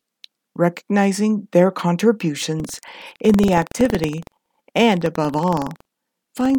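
Speech, with buffer tearing from 2.55 s to the end: a steady robotic rattle at 21.5 Hz, which fits a 2048-sample buffer. The writer and the reading hardware have slipped, so a small slice of each period, around 2%, replays audio from about a tenth of a second earlier, hard-spliced on both sides. Unlike an underrun, which drops to brief silences, this rattle carries stale sound and fades whenever the speech pauses.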